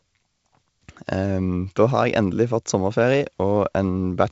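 No faults are present in this speech, which has the sound of G.722 wideband telephone coding at 56 kbit/s, with energy extending to 7.7 kHz and nothing above it, and only the light coding texture that this codec leaves at that rate.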